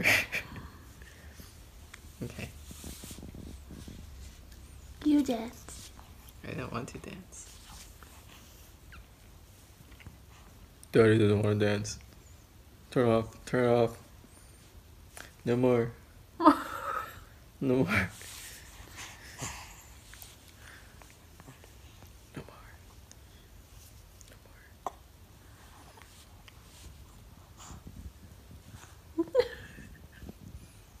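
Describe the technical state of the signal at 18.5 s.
At 18.5 s the signal is intact, with no audible technical fault at that point.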